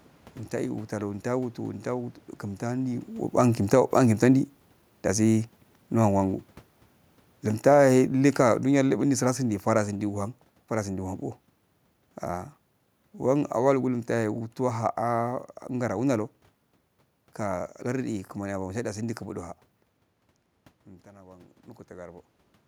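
From 7.52 to 10.21 s, automatic gain falling sets in. The control judged the input too loud or its background noise too strong and eased its gain down by about 6 dB. Speech and room noise sink together.

At 21.04 s the level drops abruptly by about 6 dB until 21.68 s. One channel dropping out is the likely cause, leaving only the other channel in the mono sum.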